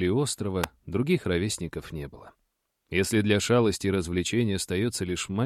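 At 0.64 s a sharp snap sits on top of the sound: an electrical switching spike, likely from a nearby switch or discharge arcing into the line. The waveform shows a narrow spike peaking near -10 dBFS; the spectrogram shows a thin full-band vertical stripe.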